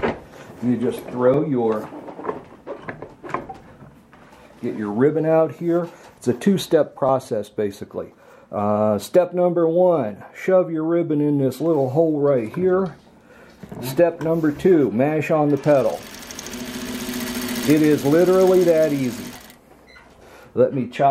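Small forward jumps at 1.34, 7.09 and 16.94 s, the last skipping about twice as much; likely dropped buffers (overrun), each losing roughly 10 to 20 ms.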